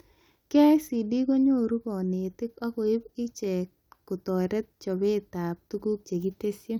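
Nothing stood out as a technical problem on listening to this speech recording.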